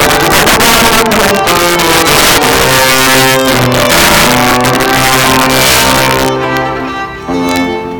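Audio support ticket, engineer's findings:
Violent cracks on loud peaks through the whole clip, harsher than clipping. Integer overflow in a gain or mix stage: driven about 10 dB past full scale, so around 7% of samples wrap to the opposite sign instead of being limited.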